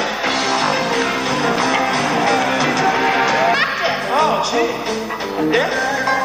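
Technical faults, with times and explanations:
Nothing stood out as a technical problem on listening to the clip.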